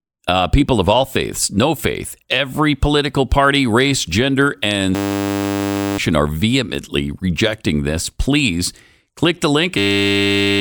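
At 4.95 s, right after "party race gender and", a system hang loop replaces the sound with a steady 100 Hz buzz until 5.98 s, when it resumes with "are vehemently rejecting this". About a second of speech is gone. The same fault returns from 9.78 s to 10.6 s and swallows roughly 0.7 s. A frozen driver left the hardware replaying one 10 ms slice, which fits a 10 ms buffer. Unlike a dropout's silence or a long-buffer stutter, the exact repetition fuses into one pitched tone.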